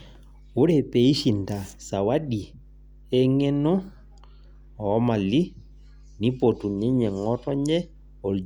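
A steady mains hum runs under the speech from start to finish. It sits at 50 Hz, with a few low harmonics stacked above it. The power line has leaked into the signal path, through a ground loop or a nearby transformer. The hum stays at about 25 dB below the speech. It sounds like a constant low drone that never changes pitch.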